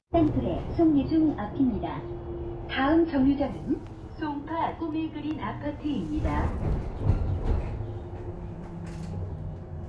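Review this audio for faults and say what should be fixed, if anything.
Nothing here needs fixing, since no faults turned up anywhere in these sounds.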